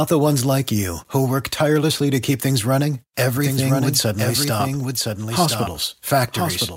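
From 3.37 s to the end, the speech carries a doubled audio track: a full-band second copy trailing by roughly a second, about 5 dB quieter, with no decay or room colour. It starts abruptly, likely from a slower capture path recording the same signal again.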